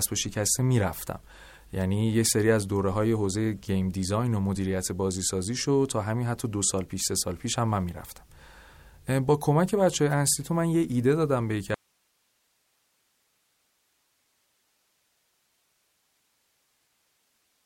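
Likely a lost input feed with the downstream path left live: an audio dropout to a faint residue in this speech from 11.74 s to the end, leaving only hiss about 45 dB down.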